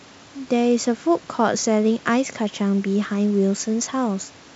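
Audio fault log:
The speech sits in a wideband telephone band with nothing above about 7.8 kHz, consistent with G.722 wideband telephone coding at what sounds like its full 64 kbit/s rate, and any coding hiss in the upper band is faint at most.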